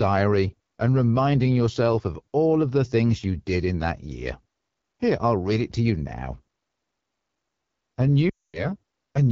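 A speech recording coded throughout with the AMR wideband (HD Voice) codec at a low rate. The roughness and raspy edge fit the 8.85 kbit/s mode. Because the harshness is constant rather than episodic, it reads as codec damage and not as a transmission error. Near the end, from 8.29 to 8.66 s, lost AMR speech frames cause about 240 ms of trouble. The decoder repeats the last pitch and vocal tract settings at falling gain, so the sound drops to near silence within two frames instead of cutting off abruptly as a plain dropout would. It then returns weak or rough.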